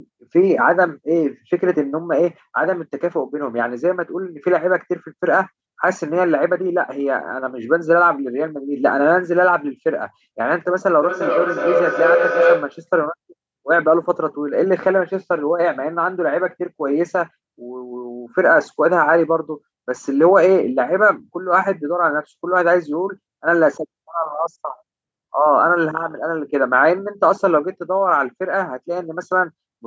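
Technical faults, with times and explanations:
11.03 to 12.91 s: feedback howl. A second device in the room feeds sound back into the microphone, and each trip round the loop adds level, so repeats grow rather than fade, narrowing to a tone near 500 Hz, with the loop repeating about every 0.4 s, and peaking about 2 dB above the speech.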